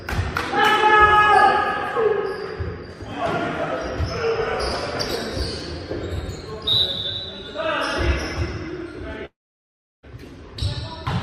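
At 9.25 s the sound smears into a fading buzz, then 0.7 s of silence; it resumes at 10.06 s missing a chunk, likely a long network dropout.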